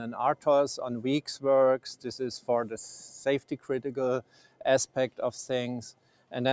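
A speech-tuned noise suppressor was left on for this non-speech audio, so the level keeps swinging by around 5 dB as held parts and tails get treated as noise and pulled down, giving a pumping feel. On top of that, the suppressor cuts the sound down further at 3.41–3.69 s (about 11 dB deep), then at 4.23–4.64 s, 4.86–5.19 s and 5.93–6.32 s (each about 12 dB), where sustained material sinks. It's all heard through call microphone processing, which leaves nothing above 8 kHz.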